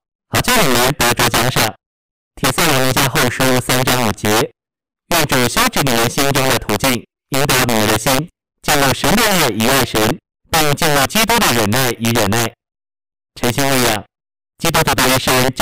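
Throughout the speech, a gain stage pushed the signal about 11 dB past full scale and let it wrap instead of limiting, a clear case of integer overflow. Several percent of samples jump to the opposite extreme, so the peaks break into harsh, violent cracks far sharper than clipping.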